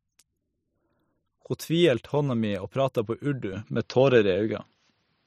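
At 3.53 s the speech turns duller, losing everything above 6.7 kHz, with a level shift and faint new noise. This is likely an input switched to a poorer device.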